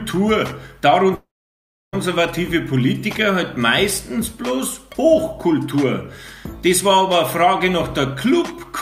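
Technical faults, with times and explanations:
1.15–1.95 s, long network dropout: the sound trails off into a fading buzz, then about 0.67 s of near silence, and resumes with about 0.78 s missing. Likely the incoming audio stopped arriving, so the receiver stretched its last sound before going quiet.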